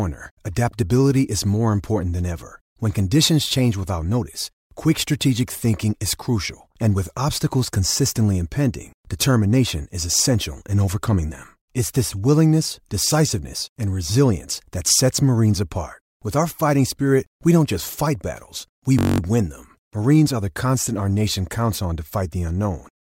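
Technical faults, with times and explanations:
9.19 s, pre-echo: right after "with obstacles consistently impending", a brief hiss about 24 dB up leads the attack, smeared across a 26 ms transform block without short blocks.
18.99–19.20 s, system hang loop: between "battles we" and "win them", a 21.33 ms chunk repeats ten times, buzzing at 46.9 Hz, likely a frozen driver cycling a 1024-sample buffer.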